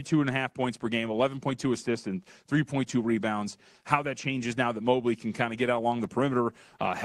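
No faults are audible in this speech; it carries the ordinary character of a WebRTC call path, with the top end stopping around 12 kHz, which fits an Opus call codec at a moderate bitrate.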